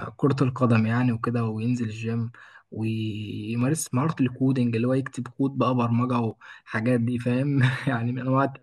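Dropped samples at 1.78 s, 3.61 s and 6.31 s show up as three isolated sharp clicks in the speech, each a thin vertical line across the spectrum. The likely cause is a fraction of a millisecond of samples going missing, so the waveform jumps straight from one value to a later one. That gap is far too short to remove any audible sound. Only the abrupt step is heard.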